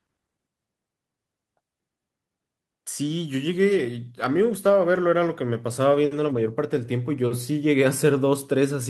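From 3.48 s to 8.11 s the speech suffers a call bitrate drop. The encoder codes far more coarsely, sounding rough and muffled, worst for about 3.1 s, consistent with a fall from 64 to 21 kbps. A spectrogram shows high frequencies abruptly missing.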